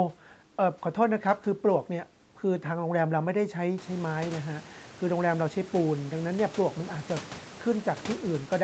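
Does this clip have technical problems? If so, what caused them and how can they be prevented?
No, the speech shows no technical faults: its content stops at 8 kHz, as expected after call microphone processing and the Opus call path, and the room noise that rises by about 17 dB around 4 s is part of the recording and stays about 20 dB below the speech.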